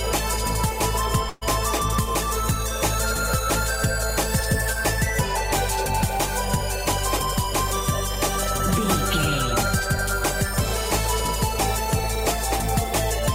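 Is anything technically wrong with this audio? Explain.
Yes. From 1.29 to 1.43 s there is a burst of packet loss: a run of consecutive packets failed to arrive in time, and the receiver filled the roughly 120 ms gap by extending the last sound it had and turning it down as the gap went on. The result is a short, smeared, fading continuation with no true silence. When the sound resumes, about 120 ms of the original is simply missing, so the audio jumps ahead.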